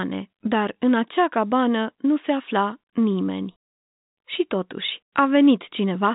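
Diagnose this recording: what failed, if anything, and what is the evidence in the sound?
Nothing in the speech points to a failure at any stage: the band stops at about 3.8 kHz, and the faint quantisation hiss that rises and falls with the level is what a working G.711 telephone coding path at 64 kbps produces.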